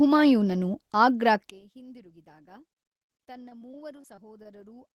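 From 1.5 s to the end, the two stereo channels likely stopped sharing the same polarity, with one channel inverted relative to the other. When the pair is folded to mono, everything common to both sides cancels, so the centred speech drops by about 26 dB. What survives is only the small difference between the channels: a faint trace of the voice, sitting well below the level heard before 1.5 s.

Between 3.49 s and 4.78 s, while that cancellation is still present, the stream suffered repeated packet loss, producing a robotic sound. Data went missing seven separate times, and each hole was covered by extending the sound that came just before it. The holes total about 100 ms, none longer than 25 ms, and the patching stretches across about 125 ms, roughly a tenth of that stretch. The result is a choppy texture in the already weakened speech.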